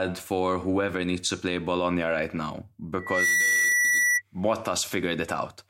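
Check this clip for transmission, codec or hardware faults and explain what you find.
There is one fault, loudspeaker feedback squeal. From 2.99 to 4.22 s, just after "right now", a 2 kHz tone swells over about a third of a second and then sits about 5 dB louder than the speech. The microphone is picking up its own loudspeaker, and the loop gain at 2 kHz exceeds one.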